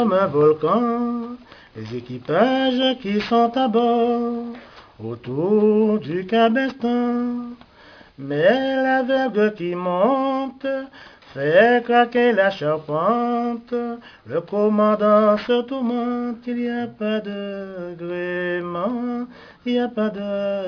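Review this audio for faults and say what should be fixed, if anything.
Aliasing, throughout the clip: the sound was downsampled without an anti-aliasing filter, which fits a drop from 44.1 kHz to 11 kHz. Content above 5.5 kHz folds back as gritty, metallic tones about 25 dB below the wanted signal, and the spectrum runs hard to the band edge. To prevent it, low-pass filter below the new Nyquist frequency before reducing the sample rate, or use a proper resampler that does this automatically.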